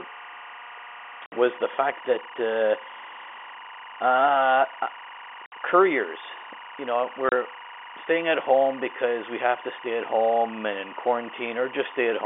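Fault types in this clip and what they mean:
Timecode bleed: Linear timecode at 24 frames per second leaks into the speech, sitting about 20 dB below it. Its square wave flips between tones near 1 and 2 kHz, producing a steady chirping warble behind the voice for the full clip.
Packet loss filled with silence: Lost packets are replaced by dead silence, leaving hard-edged gaps. Two 60 ms holes, at 1.26 s and 5.46 s, and a 30 ms hole at 7.29 s point to 30 ms packets dropped.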